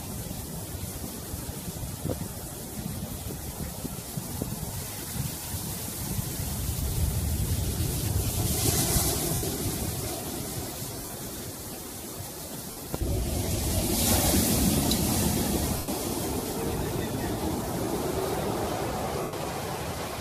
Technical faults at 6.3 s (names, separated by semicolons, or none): lost LE Audio frames